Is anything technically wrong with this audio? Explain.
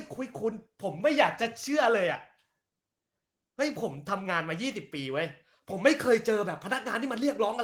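No, nothing stood out as technically wrong on listening to this speech clip.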